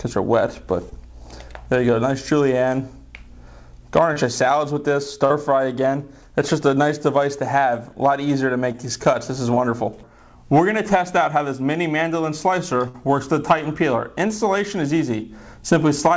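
Short concealed packet loss occurs at 0.90, 4.13, 5.26, 8.72, 9.54 and 14.28 s: 20 to 40 ms of audio arrived too late, so the receiver extended the preceding sound and blended back, leaving brief smears or wobbles. A burst of packet loss at 12.88 to 12.96 s removes 60 ms; the decoder stretches the last sound into a fading buzz or hiss, then resumes further on with that stretch gone. The audio came through a call path with nothing above 8 kHz, which fits the G.722 codec at 64 kbps.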